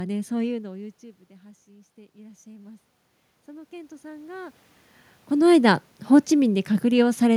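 From 1.65 to 2.92 s, and again from 3.46 to 4.61 s, the automatic gain is rising. Each time the input falls by about 22 dB and the gain control climbs slowly to compensate, by about 4 dB and then about 5 dB. The voice and the room noise swell together over a little more than a second. On a waveform the envelope ramps up smoothly, and a spectrogram shows the noise floor brightening across all frequencies.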